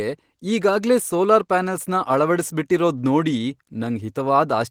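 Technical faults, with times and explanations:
No technical faults are audible anywhere in this speech recording.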